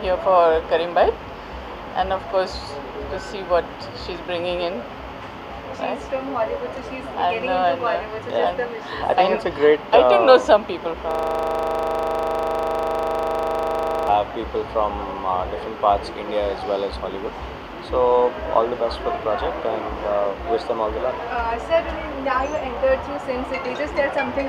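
At 11.11 s the audio locks into a system hang loop that runs until 14.08 s. The machine or its driver stalled, but the sound hardware kept playing the same stretch of ring buffer over and over. The loop is 40 ms long, so that one fragment repeats exactly at 25 Hz for about three seconds. You hear it as a hard, rattling buzz with a fixed pitch, before normal playback picks up again.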